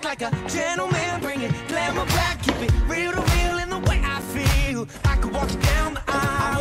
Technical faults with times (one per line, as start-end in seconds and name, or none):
1.71 gap between chunks
4.22 gap between chunks